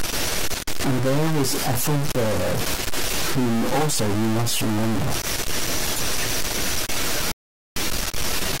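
From the start, the speech carries a distortion that never lets up. It sounds like a stuck bit, likely one data line held at a fixed value by a broken connection or a faulty converter. About half the samples land off by that bit's weight, so the error follows the shape of the waveform. Quiet gaps don't go silent. They fill with a steady hiss, because the stuck bit flips with the sign of small values.

At 7.32 s the sound cuts to silence. It resumes at 7.76 s, picking up exactly where it stopped. This is a rebuffering stall. The player ran out of downloaded audio and waited for more to arrive. Nothing is missing from the speech. The gap simply adds about 0.45 s of dead air, heard as an abrupt pause inside the flow.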